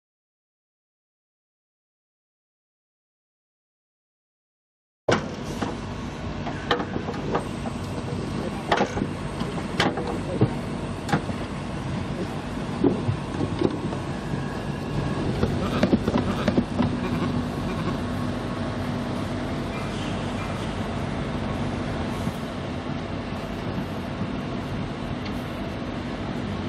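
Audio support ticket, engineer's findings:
Damaged data in a compressed stream: brief chirps/blips at 5.64, 11.4, 15.24, 16.9 and 20.64 s. Decoder misreads corrupted frames, loses sync, resumes at the next header.

Doubled audio track, 14.94 to 22.29 s: full-band second copy trailing by roughly 0.7 s at about equal level, cutting in and out abruptly. Likely a second capture path or misaligned edit stacking two copies. Unlike echo or reverb: no decay, no room colour.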